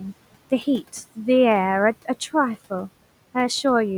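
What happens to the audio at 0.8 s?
At 0.8 s the sound carries noise suppressor artifacts, present throughout the clip: the suppressor pulls the room noise, about 20 dB below the speech, down by about 18 dB band by band each frame, so the noise sinks between the words and rises under them.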